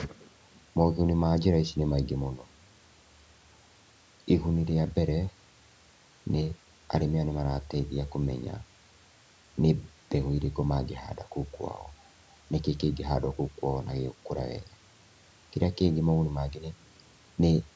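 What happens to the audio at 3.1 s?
Nothing goes wrong at 3.1 s: the speech continues intact, with only the ordinary band-limiting of call microphone processing audible there.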